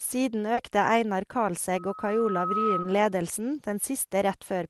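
At 0.54 to 0.58 s there is a short concealed packet loss. About 30 ms of the speech arrived too late to decode, and the receiver continued the preceding sound and blended back. Unlike a plain dropout there is no silent gap, only a brief smear.

From 1.75 s a loudspeaker feedback squeal begins. A single 1.3 kHz tone caught in a microphone–loudspeaker loop grows over roughly a second to about 5 dB above the speech and stops at 3.14 s. Its self-swelling build-up sets it apart from a steady interfering hum.

Inside the squeal, at 2.82 to 2.85 s, a second concealed loss fills about 20 ms, heard as a brief wobble rather than a click or hole.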